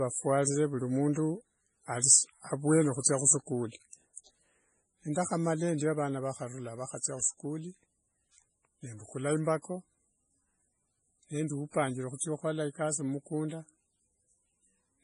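Heavy MP3 compression is the likely cause of the damage running through all of the speech, and the encoder appears starved of bits, which fits a very low bitrate around 24 kbps. To cope, it removes everything above 10.5 kHz, so the top end is simply missing and sibilants lose their crispness. Weaker frequency components are dropped and restored from frame to frame, giving the speech a watery, swirling texture with metallic chirps on s sounds and smeared consonant onsets.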